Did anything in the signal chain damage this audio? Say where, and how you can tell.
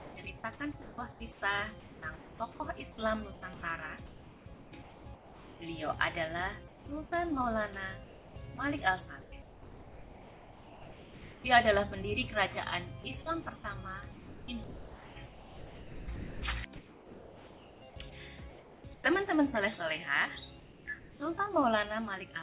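Yes. The damage comes from call processing on the sending side, where the voice detector gated the audio.

Sound chopped by the voice detector runs from 0.0 to 5.6 s, 8.04 to 11.44 s and 13.02 to 16.42 s. Each stretch has over 2 s swapped out in pieces, so the sound turns choppy. The likely cause is the detector repeatedly toggling transmission. On a spectrogram, fine-grained texture alternates with smooth noise blocks.

Comfort noise in place of the background appears at 6.68 to 7.12 s, 18.1 to 19.04 s and 20.6 to 21.2 s. The real background gives way to steady, featureless hiss. This is likely synthetic fill during transmission pauses. The waveform shows an even, flat noise floor, and the spectrogram shows uniform smeared noise without detail below the 4 kHz ceiling of the G.711 path.

Sound dropped by the voice detector occurs at 7.06 to 7.12 s, with about 30 ms of sound lost, and at 18.1 s, where about 20 ms is lost. 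The sound abruptly becomes noise, likely because the detector judged it to be background. On the waveform the envelope cuts straight down to a low noise level.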